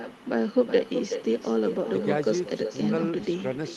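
Echo with no canceller runs through the whole of this speech clip: every phrase is trailed roughly 0.4 s later by a quieter copy, about 9 dB below the direct sound, and thinner. The far end is playing the call over a loudspeaker, its microphone picks that playback up, and with no echo cancellation stripping it out, the talker's own sound returns after the network round trip. The high end tops out around 12 kHz, as expected from the call codec.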